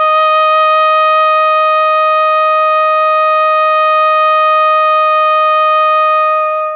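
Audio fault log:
Nothing stood out on listening to this music, which reaches the ear through a call path whose telephone-band codec leaves nothing above 4 kHz.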